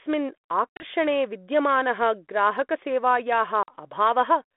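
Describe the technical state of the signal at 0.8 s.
At 0.8 s the signal falls inside a burst of packet loss on an ADPCM call, running from 0.73 to 0.85 s. About 70 ms of audio is missing, scattered over 80 ms as hard-edged silent holes, the longest about 40 ms, which points to roughly seven lost packets. What separates this from a plain dropout is the return. The decoder's adaptive predictor and step size no longer match the sender's, so sound comes back with brief, slight distortion before settling. This happens within the 3.5 kHz telephone band of the 32 kbit/s G.726 link.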